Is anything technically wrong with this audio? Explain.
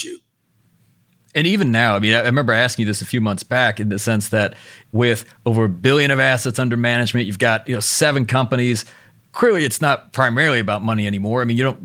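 No, nothing is technically wrong with this audio.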